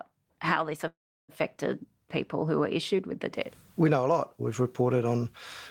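Just after "how this", from 0.87 to 1.31 s, a fading fill drops into about 340 ms of silence before the speech resumes where it stopped, nothing lost but running 411 ms late: a call audio freeze, likely from delayed packets emptying the jitter buffer.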